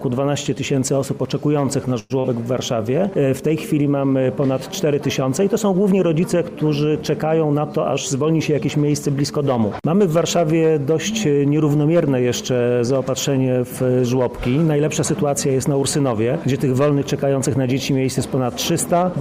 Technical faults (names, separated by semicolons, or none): call audio freeze; short concealed packet loss; jitter buffer speed-up